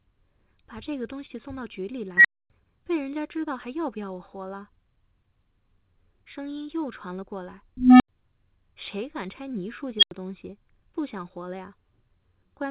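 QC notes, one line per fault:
1.26 to 1.31 s, short stall from a late packet: a packet came in late, so the jitter buffer ran dry and the receiver stretched the preceding sound for 32 ms until it arrived, then resumed where it left off. Nothing is lost, but a syllable is held slightly too long and playback runs 32 ms later afterwards.
2.17 to 2.50 s, 7.77 to 8.09 s and 9.99 to 10.11 s, unstable filter: a recursive filter received bad coefficients and its output grew without bound, so each time a tone swells, clips, overflows and drops out until the filter resets. The first is a high squeal near 2 kHz building in about 75 ms, then about 256 ms of silence. The second is a low tone around 300 Hz growing over about 230 ms, then about 85 ms of silence. The third is a sharp squeal near 3 kHz building up in about 37 ms, then about 85 ms of silence. The call codec's band limit, with nothing above 4 kHz, fits G.711 A-law at 64 kbps.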